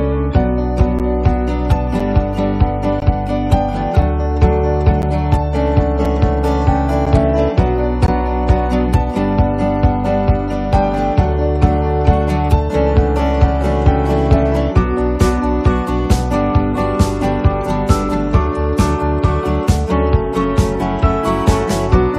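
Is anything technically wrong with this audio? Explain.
Yes. There are gaps between stream segments: timestamps of consecutive 1-second segments fail to meet, so playback inserts hard-edged silences of 4 to 17 ms at 0.99, 2.00, 3.00, 4.02, 5.02, 6.05, 7.06 and 8.07 s, a regular once-per-second stutter.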